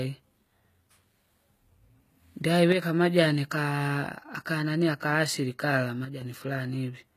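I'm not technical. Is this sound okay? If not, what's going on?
No. The speech was most likely squeezed with HE-AAC compression, which keeps only the lower part of the sound and rebuilds the treble by copying it upward. That rebuilt top end isn't the real thing, so the damage is plainly audible throughout.

There are also two moments where one channel drops out, likely from a brief loss of one side of a two-channel signal. Here both sides are mixed together, so losing one makes the sound suddenly quieter, from 2.72 to 2.82 s and from 6.05 to 6.22 s, right after "akanani aka asili kala".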